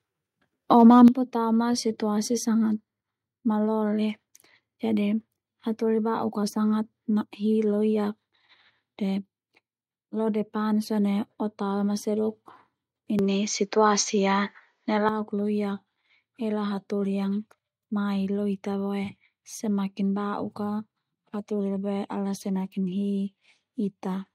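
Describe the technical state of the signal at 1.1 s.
At 1.1 s the level has just dropped by about 9 dB. The step lands at about 1.08 s, and both the speech and the background fall together at once. That sudden, even drop is the sound of microphone volume being stepped down. The call software most likely cut the device's input volume in a single move. It was reacting to the harsh peaks that came just before.

Those peaks run from 0.75 to 1.04 s. Their tops are flattened. This is microphone overload. The input volume was likely set too high, so the loudest moments hit the converter's ceiling. Only a small share of the samples are cut. The result is a brief crackling, gritty edge on the loudest syllables rather than constant distortion.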